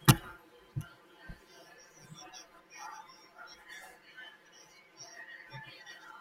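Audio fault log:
Throughout, channel delay (comb filtering): speech sounds hollow and phasey, from one channel running about 5 ms late and cancelling in mono at notches starting around 100 Hz and spaced about 200 Hz apart.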